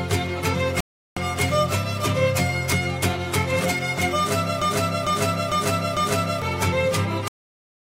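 A Bluetooth stall hits at 0.80 s. The sound drops to silence for about 0.36 s and resumes at 1.17 s. The likely cause is radio interference that delayed packets on the wireless link, so the headphones' small buffer emptied and playback had nothing to play. It waited until the retransmitted packets arrived and then carried on. The gap is a clean hole in the audio rather than a fade or a crackle.

A broken-record loop runs from 4.62 s to 6.42 s. A 0.45 s fragment plays four times back to back, and each pass is an exact copy with an identical start and finish. This was likely caused by the player or stream stalling and re-sending the last chunk it had buffered instead of fresh material. Whatever audio belonged in those 1.8 s is missing, and the sound jumps forward once the repetition ends.

A cut-off end comes at 7.28 s. The sound stops abruptly in the middle of an event and falls straight to digital silence for the rest of the clip, with no natural decay or tail. 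The final buffers were never written out or played, so the recording is truncated. It does not finish; it simply ends, and the hard edge at that point is audible.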